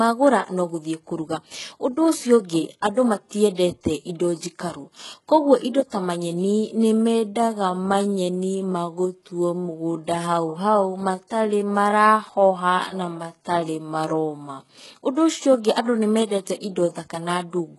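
Throughout, the audio shows heavy codec damage, likely from HE-AAC compression at a rate that fits around 12 kbps. Only the lower band is truly coded; the treble is rebuilt by copying lower bands upward, so harmonics above the crossover do not line up, and nothing remains above 11.5 kHz.

Pre-echo appears from 3.55 to 3.58 s and again at 16.46 s. The transform block spreads its quantisation noise ahead of a sharp attack, giving a brief hiss of about 32 ms and then 11 ms before each onset, which softens the attack.

From 6.41 to 14.77 s there is a time-stretched section, likely from software slowing the passage to about 0.63 times its original speed while holding pitch by repeating short pieces. The pace drops abruptly at the start of the section, and the audio drags while its pitch stays unchanged.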